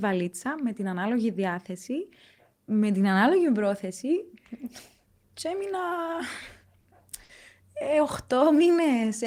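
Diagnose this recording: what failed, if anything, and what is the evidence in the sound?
Network side, at the jitter buffer: two short stalls from late packets, at 6.80 s and 7.24 s. The speech holds its last sound a beat too long, for about 40 ms and then about 50 ms, with a slight buzz or dip. Nothing is lost; playback just resumes late.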